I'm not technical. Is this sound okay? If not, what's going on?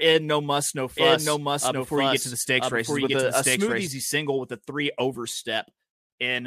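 No. From 0.97 to 3.87 s there is a doubled audio track: the same speech plays twice at once, with a second copy trailing about a second behind and roughly as loud as the original. Unlike a natural echo, the copy doesn't fade or sound roomy, and it starts and stops abruptly. The likely cause is the audio being picked up a second time through a slower route, or an edit that left two copies misaligned.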